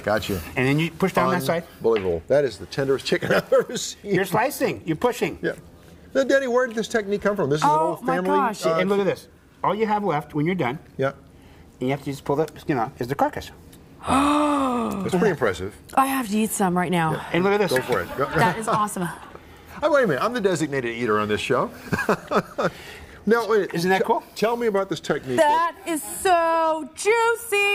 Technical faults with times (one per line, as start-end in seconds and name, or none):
11.82-12.45 drift correction step
24.52-25.54 drift correction step